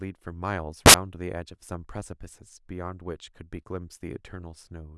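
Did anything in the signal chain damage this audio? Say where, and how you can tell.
Yes. The damage sits in sample-format conversion. From 0.86 to 0.94 s the speech is replaced by a burst of loud, harsh broadband noise lasting about 80 ms. That is the sound of samples built from the wrong bytes. The reader assembled each sample with its bytes misaligned or in the wrong order. The fast-changing low bits landed in the high part of each value. Random large values result, which is why the burst sounds like noise, not distortion.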